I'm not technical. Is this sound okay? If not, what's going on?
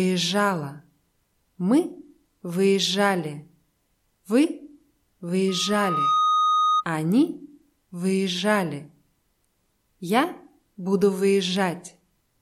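No. From 5.48 to 6.85 s there is loudspeaker feedback squeal: a microphone picks up its own speaker, and one high tone near 1.2 kHz swells over under a second into a piercing squeal. Unlike a steady whistle, it grows by itself.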